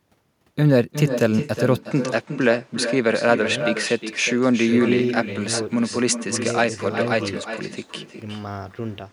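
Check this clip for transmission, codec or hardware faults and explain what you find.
Two faults are present: an uncancelled echo across the whole recording, and a change in input character from 1.83 s onward.

Echo with no canceller runs from start to finish. The far end is evidently playing the call on a loudspeaker that its microphone picks up, with nothing subtracting it. The speech therefore returns after the network round trip, roughly 400 ms later, at about 8 dB below the original, as a thinner shadow trailing each phrase.

At 1.83 s the input most likely switched to a poorer device, such as a different microphone or a headset call profile. From there to the end, the band narrows, so the sound turns duller. There is no gap at the changeover and almost no level jump, but a faint new noise floor appears, roughly 35 dB below the speech.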